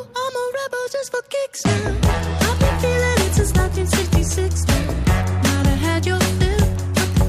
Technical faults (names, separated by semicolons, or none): none